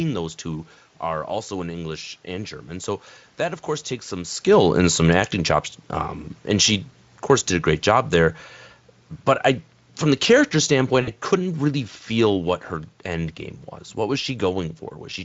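From 10.03 s the automatic gain control judges the input too loud, or its background noise too strong, and starts turning its gain down, easing it by about 4 dB until 13.36 s. The speech sinks steadily, and the room noise behind it drops by the same amount.

Within that slope, at 11.01 to 11.1 s, VoIP packet loss concealed by the speech codec appears. About 60 ms of audio never arrives, which fits three lost 20 ms frames. The decoder fills the gap by extending its last pitch and filter, giving a brief buzzy tone or coloured noise that fades, and the speech stays thin for a moment after packets return.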